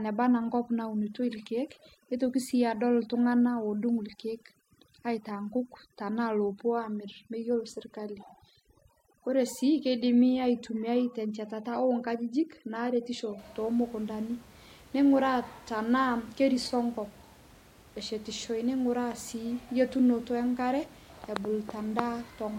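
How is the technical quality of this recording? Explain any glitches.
The recording has one processing fault: overdone noise removal, running from the start to 13.39 s, just before "tomukundanii neinguraa tanaa kerisoo". A noise reduction stage was set far too aggressively, so any frequency band sitting close to its noise estimate gets pushed down hard or switched off entirely, and the softer parts of the speech are caught along with the noise. The background collapses into near silence sprinkled with twinkling specks. After that point the room noise sits about 26 dB below the speech.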